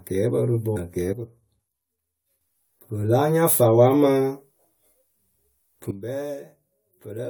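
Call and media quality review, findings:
Call and media quality review, findings:

Damaged data in a compressed stream at 0.76 s: a short decoding glitch. The decoder hit corrupted frame data, could not decode those frames, lost sync and resumed at the next valid frame header. Probable component: the transport or storage path carrying the encoded stream, not the encoder.

Sudden gain jump at 1.13 s: speech and background noise both drop by about 10 dB in one step, and level recovers abruptly at 2.41 s. Another sudden gain jump at 5.91 s drops the level by about 12 dB and it stays low to the end. Likely cause: a digital gain setting or bit shift applied without a ramp, so the level changes between adjacent samples.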